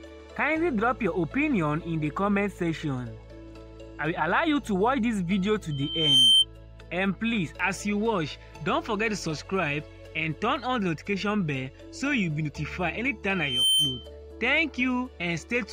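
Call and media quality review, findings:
Loudspeaker feedback squeal: steady 3.1 kHz tone swelling over the audio, 5.71–6.45 s (builds over about half a second, about 10 dB above the signal) and 13.34–14.10 s (quicker rise, about 5 dB above). Mic hearing its own loudspeaker; loop gain above one at 3.1 kHz.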